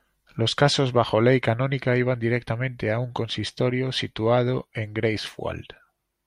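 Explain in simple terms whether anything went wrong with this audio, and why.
Nothing went wrong with the technical side of this speech recording: the signal stays steady and intact the whole way, with no dropouts, distortion or other audible problems.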